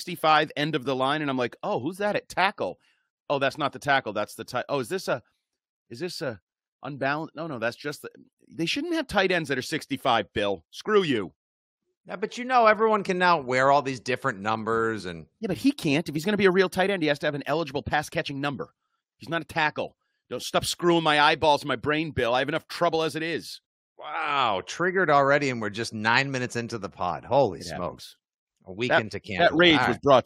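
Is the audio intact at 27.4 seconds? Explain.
Yes, the speech at 27.4 seconds comes through intact, with no dropout, click, distortion or other technical fault at that point.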